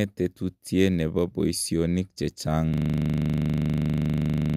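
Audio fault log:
2.74–4.57 s, system hang loop: the speech freezes into one 40 ms slice repeating exactly, over forty times, as a steady 25 Hz buzz until the end. Unlike a stutter or dropout, every cycle is identical and perfectly regular, and the speech never resumes.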